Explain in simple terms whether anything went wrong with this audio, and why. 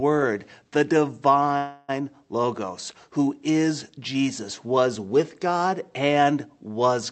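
At 1.57 to 1.91 s the sound stalls into a fading buzz or hiss, then resumes exactly where it stopped: a call audio freeze, likely from delayed packets, not a dropout, since nothing is lost.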